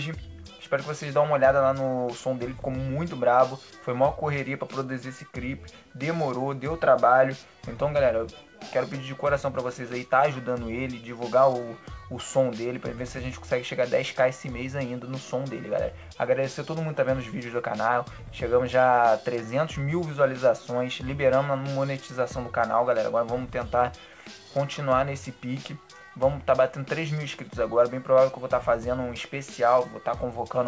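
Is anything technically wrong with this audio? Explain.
No, nothing is technically wrong.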